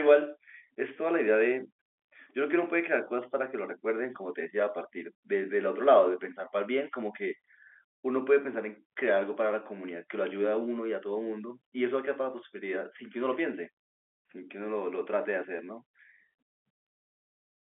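Nothing's wrong with this speech recording; it just carries the narrow, boxy sound of an ordinary G.711 telephone line, with the sound sitting roughly between 300 Hz and 3.4 kHz, exactly as a phone call should.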